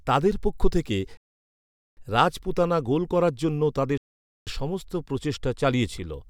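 The speech drops to silence at 1.17 s for 0.8 s and at 3.98 s for 0.49 s, then resumes exactly where it stopped: rebuffering stalls, as playback ran out of downloaded audio.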